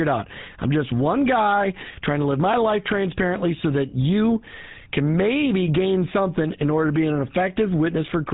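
From start to finish the speech runs through the GSM full-rate codec, which rebuilds it from a vocal-tract model driven by thinned, regularly spaced pulses and drops everything above 4 kHz. The roughness is plainly audible: a buzzy, gravelly texture with a dull top, which fits a 13 kbps rate.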